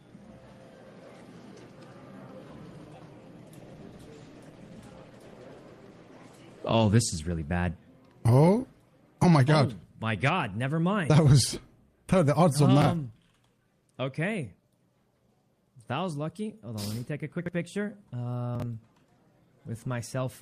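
From 3.55 s to 7.51 s a call bitrate drop halves the encoder's budget from 32 to 16 kbps, holding the low rate for about 3.9 s. With fewer bits each frame is quantised more coarsely, so the sound turns rough and watery until the rate returns.

Chunks out of order follow at 12.82 s, 17.39–17.49 s and 18.55–18.62 s. Blocks of about 23 ms each play late, by one, three and two chunks respectively, so their content lands after material it should precede. Each event gives a brief jumbled stutter.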